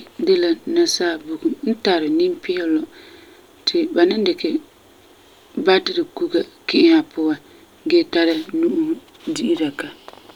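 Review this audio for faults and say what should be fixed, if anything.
No faults found; nothing needs fixing.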